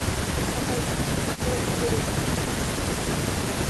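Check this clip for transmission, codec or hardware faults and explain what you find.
Two faults show up in this speech clip, back to back around 1.4 s.

Echo leak, 1.34 to 1.41 s: a faint copy of the speech returns about 300 ms late and around 15 dB down, likely a loudspeaker echo the far-end canceller missed.

Speech suppressed in double talk, 1.42 to 1.46 s: the voice briefly sinks by roughly 5 dB for about 40 ms, likely the canceller ducking everything while both ends overlap.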